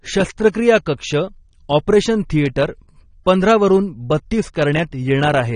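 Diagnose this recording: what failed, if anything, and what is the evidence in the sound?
The codec stage failed, with AAC compression damage audible throughout the speech. The top end is dull and smeared. Sibilants turn fizzy and warbling. That is likely AAC-LC quantising too coarsely, lowering its cut-off and leaving spectral holes, which fits a bitrate near 32 kbps.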